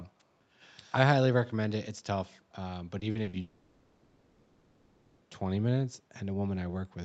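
At 0.19 to 0.24 s there is a very faint echo leak, a delayed copy of the speech arriving about 254 ms behind the original and sitting far below it in level. The likely cause is a far-end loudspeaker whose echo canceller let a small residue of its microphone pickup through, which was then sent back down the call.

From 2.99 to 3.35 s the audio turns choppy with repeated packet loss, producing a robotic sound. Four short holes fall within this stretch, the longest 40 ms, and together they account for about 140 ms, roughly 39% of the span. Each hole is patched by extending the last fragment of sound, and the next hole follows before the speech can recover. The result is a stuttering, synthetic texture with pieces missing.

A long network dropout follows almost immediately, from 3.41 to 5.23 s. For about 1.8 s no real audio is played, and the whole gap is filled by concealment rather than by silence. 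The last sound is stretched into a buzzy, decaying tone that carries through the stretch before the speech resumes with the lost portion gone. The likely cause is a sustained interruption in packet delivery. Throughout the clip the Opus call path limits content to 8 kHz, giving a dulled top end.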